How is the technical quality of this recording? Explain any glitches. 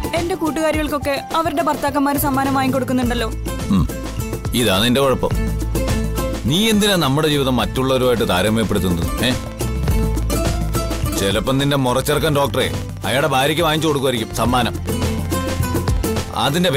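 The recording has one clear problem: a train of clicks over the back half. From 9.44 s to 16.70 s there's a regular ticking at about 12.7 clicks per second, around a hundred in all, each peaking a touch above the audio itself. Likely interference from nearby gear or a faulty connection or power supply injecting near-identical pulses, so it sounds like steady popping that carries through the pauses too.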